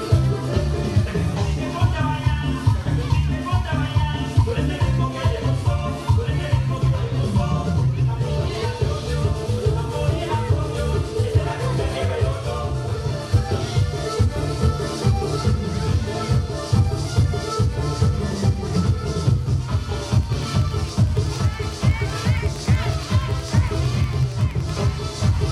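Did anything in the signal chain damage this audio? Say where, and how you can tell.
Yes: a train of clicks runs from 20.14 to 24.70 s, regular ticks at 10.8 per second peaking about 5 dB over the signal, likely from interference pickup in analogue wiring.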